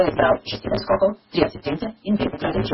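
From start to finish, the speech carries a steady buzz at 172 Hz. It comes from a block size mismatch (truncated). Each block is written longer than the next stage reads, and the tail is dropped. The speech runs about 1.88 times too fast but keeps its normal timbre. The buzz rate fits a 256-sample read.

Throughout, nothing is heard above 5.6 kHz. The sound is watery and swirly, with metallic chirps on sibilants and smeared onsets. Heavy MP3 compression is the likely cause. Weak frequency lines flicker from frame to frame. The damage points to a very low bitrate, around 16 kbps.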